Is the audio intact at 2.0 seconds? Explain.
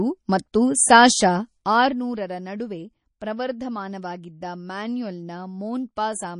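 No. At 2.0 seconds the clip is inside a stretch of zipper noise running from 1.56 to 2.01 s, ending just before "ನಡುವೆ ಪ್ರವರ್ಧಮಾನವಾಗಿದ್ದ". Here the level drops by roughly 10 dB. The drop is applied in unsmoothed steps, about a hundred per second, rather than as a smooth fade. Each step leaves a small click. Together they form a rapid ticking that rides on the speech while the level falls.

The moment also carries the damage heard across the whole clip. It is plainly audible and sounds watery and swirly, with smeared attacks and metallic chirps on s sounds. Nothing is left above 10.6 kHz. This points to MP3 compression as the likely cause, at a low bitrate that fits about 32 kbps. With so few bits, weak frequency lines drop in and out between frames, and the treble is cut at a fixed point.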